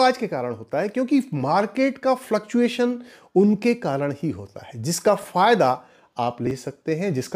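Chunks out of order occur twice. At 5.22 to 5.24 s, one 10 ms chunk of audio arrived late by a single chunk and was played after the one that should have followed it. At 6.47 to 6.51 s, a 10 ms chunk came three chunks late and was played after them. No audio is missing in either place, but each misplaced chunk creates three hard joins. The result is a brief jumbled stutter, shorter at 5.22 s and longer at 6.47 s.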